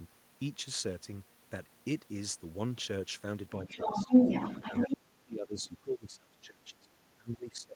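Speech here, and two echo-canceller problems are tangled together in the second half. First, speech suppressed in double talk: from 3.62 to 3.88 s the talker's level sags briefly, roughly 5 dB at worst and only about 150 ms of it in total, so it's a shallow duck. The likely cause is that the far side was talking at the same time, and the canceller couldn't separate the two voices, so it pulled everything down. It happens again, much harder, from 4.69 s right to the end at 7.76 s, with drops reaching around 25 dB, so the talker gets heavily suppressed in that stretch. Second, there's the other side's voice leaking through from 3.65 to 4.97 s, a second voice sitting on top of the talker at about 5 dB louder than the talker. That's likely far-end audio from the loudspeaker getting back into the mic, with the canceller failing to remove it.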